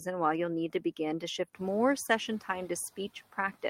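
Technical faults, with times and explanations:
1.55–1.93 s, noise suppressor catching up: the room noise steps up by about 11 dB around 1.5 s. The suppressor's noise estimate lags, so the louder noise passes with little reduction, then sinks by about 9 dB over 380 ms as the estimate adapts.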